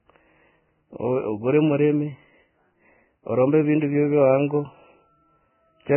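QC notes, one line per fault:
throughout: Vorbis compression. Nothing remains above 3 kHz, and the treble that is left sounds hissy and grainy, with roughened speech and blurred onsets. This points to heavy coding near 10 kbps, likely Vorbis; a simple low-pass filter would leave no such grain.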